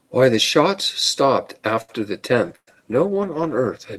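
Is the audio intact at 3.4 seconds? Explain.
No, 3.4 seconds falls inside a call bitrate drop that starts at about 2.49 s and runs right to the end of the clip. The call's bandwidth estimate fell, so the encoder got squeezed from 48 kbps down to 14 kbps, bottoming out for roughly a second. At that rate it codes everything much more coarsely and gives up the top end, so the speech turns rough, watery or muffled.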